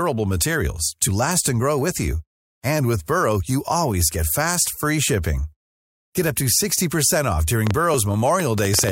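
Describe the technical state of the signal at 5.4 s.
At 5.4 s the speech signal is intact, with no dropout, clipping, glitch or other technical fault audible at that moment.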